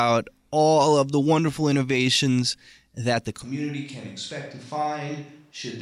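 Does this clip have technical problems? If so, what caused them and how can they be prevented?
Yes. After "wonderful innovations that the", at 3.45 s, the sound abruptly turns roomy and thin, about 10 dB quieter with audible room noise, to the end, likely a switch to a distant microphone. Monitor the close microphone's feed during recording and keep a backup recorder on it.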